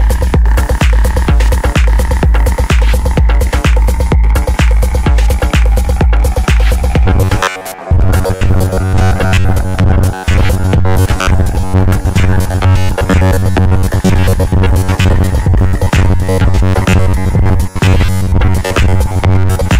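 From 7.06 s to the end at 19.79 s, the sound turns robotic, a rigid metallic buzz at 93.8 Hz. This is likely robotic sound from repeated short buffers. About 10.7 ms chunks repeat for roughly 70% of the time, replacing skipped audio.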